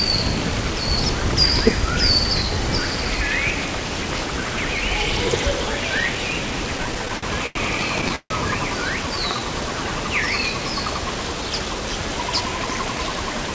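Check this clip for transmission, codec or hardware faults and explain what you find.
There are four network-timing faults here, all between about 6.8 and 11.8 s. The audio has nothing above 8 kHz, which fits a G.722 call path at 64 kbps.

From 6.78 to 7.57 s there's a run of repeated stalls (stutter). Packets kept turning up late, so the jitter buffer drained eight times and the receiver stretched the last sound to fill each gap, about 185 ms in total and 88 ms at most. Nothing is lost, but the sound drags and hiccups.

At 8.16 to 8.32 s comes a call audio freeze, likely from packets held up in transit. The receiver filled 147 ms by continuing the last sound, fading into about 70 ms of silence. Then playback resumes where it stopped, so the audio now sits 147 ms later.

Between 9.03 and 9.40 s there's a jitter buffer slow-down. The receiver kept repeating single pitch periods to rebuild its reserve, adding 52 ms. 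That stretch plays at 88% speed with unchanged pitch, so the sound feels drawn out.

From 11.35 to 11.81 s the opposite happens, a jitter buffer speed-up. With too much audio queued, the receiver snipped out short pitch-period chunks, about 50 ms altogether, to cut the delay. That bit runs at 111% speed, same pitch, and sounds a little rushed.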